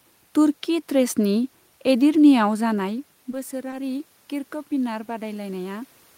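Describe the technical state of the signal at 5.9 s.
At 5.9 s the voice and the room noise behind it are swelling together, still climbing. This is automatic gain rising, running from 4.75 s to the end: after the input dropped by about 11 dB, the gain control is gradually raising its gain to compensate.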